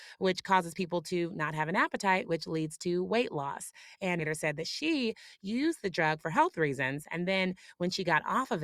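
At 4.19 to 4.23 s a short blip is followed by an abrupt jump forward, with the speech resuming at "said that she". This is a stream segment skipped: one segment of the stream likely failed to load, and playback continued from the next.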